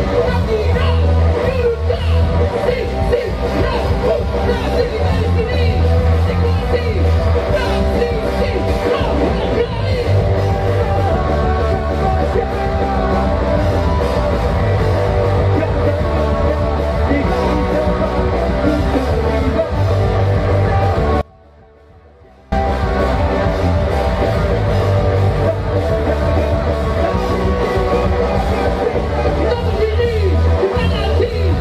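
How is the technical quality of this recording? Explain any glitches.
There is one clear glitch: an audio dropout to a faint residue from 21.21 s to 22.52 s. For about 1.3 s the sound cuts out abruptly and drops to a faint remnant roughly 30 dB below normal level, then snaps back mid-flow. The likely cause is a break in the wanted feed while the downstream path stayed live, so only leakage reached the output. The edges are hard, not a pause or fade.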